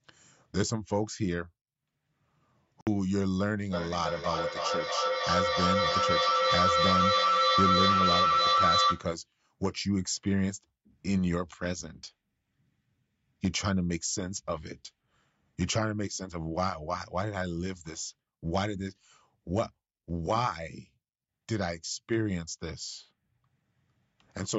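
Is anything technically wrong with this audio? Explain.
Yes, two things. At 2.81 s the sound cuts out for 58 ms and picks up further along, likely a Bluetooth dropout where a few packets never reached the headphones. From 3.73 to 9.12 s there's feedback echo between two devices: one device replays the other's microphone, which picks it up again, so everything returns roughly every third of a second, building to about 4 dB above the speech. The band stopping at 8 kHz is just the call's microphone processing.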